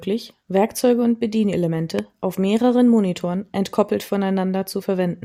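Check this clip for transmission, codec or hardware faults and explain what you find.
There's one hardware-type fault in this speech clip: a single loud pop from about 1.99 to 2.01 s. It's most likely a voltage spike, say from a plug, switch or static discharge, getting into the signal chain. You hear a sharp click-thump roughly 10 dB above the speech, which carries on underneath it.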